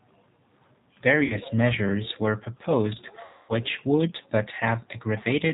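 Throughout the speech the G.729 codec damage is plainly audible, which fits an 8 kbit/s G.729A-type coder. Each 10 ms frame is rebuilt from a vocal tract filter, a pitch predictor and a few pulses, so voiced sounds come out rough and slightly synthetic. On a spectrogram the energy stops sharply at 4 kHz, with nothing above it, and the harmonics look smeared and patchy.

VoIP packet loss concealed by the speech codec first appears from 1.24 to 1.38 s, just before "measures were proposed". About 60 ms of audio is missing, which points to roughly two lost packets. The decoder repeats its last pitch and filter at falling gain. The result is a short buzzy smear that fades. The waveform shows a repetitive, decaying stretch, and the spectrogram shows frozen horizontal harmonics where the speech should move. The second loss runs from 3.25 to 3.53 s, between "measures were proposed" and "would but". 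This gap is much longer at about 240 ms, which fits around eight lost packets. The tone fades to a weak, coloured hum, and the following syllables start thin and distorted while the decoder recovers.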